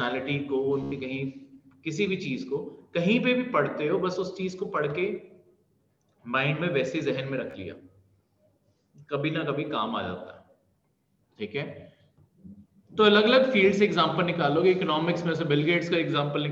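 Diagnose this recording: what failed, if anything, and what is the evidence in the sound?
Bluetooth stutter at 0.83 to 0.92 s and 7.51 s: the wireless link dropped packets, so the receiver looped its last slice, about 87 ms and 29 ms lost, before resuming further on.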